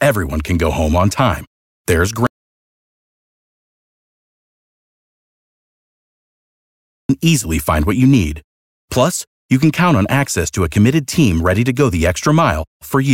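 The audio input was likely lost, through a disconnected device or failed link, while recording carried on writing silence: an audio dropout to silence from 2.27 to 7.09 s. The speech cuts off after "home on time there's" into dead silence, no room tone, and resumes abruptly at "easily find what you", with about 4.8 s gone.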